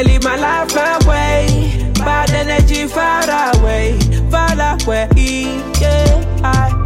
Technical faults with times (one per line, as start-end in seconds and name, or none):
none